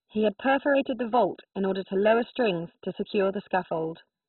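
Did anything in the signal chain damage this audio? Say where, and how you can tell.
Yes. Throughout the speech the sound is dull and boxed-in, with nothing above about 4 kHz, and it carries a gurgling, granular roughness. The upper range seems to flicker in and out rather than roll off smoothly. This points to the codec stage, likely MP2 compression at a very low rate, which fits something around 16 kbps. With so few bits, the encoder shuts off whole upper sub-bands and coarsely quantises the ones it keeps.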